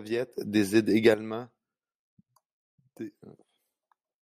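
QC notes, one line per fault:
0.38–1.14 s, sudden gain jump: speech and background noise leap up together by about 10 dB, then fall back, likely a digital gain change applied instantly without a ramp.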